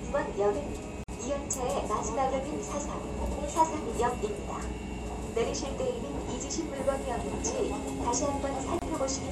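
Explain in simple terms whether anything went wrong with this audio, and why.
Two short dropouts break up the sound: one at about 1.04 to 1.09 s, lasting 49 ms, and another at 8.79 to 8.82 s, lasting 27 ms. Each is a gap at a join of encoded pieces. The audio was compressed in separate chunks and stuck back together without cleanup, so the bit of silence each chunk picks up at its start and end stays in. That's why the sound blinks out with softened edges and then resumes right where it left off.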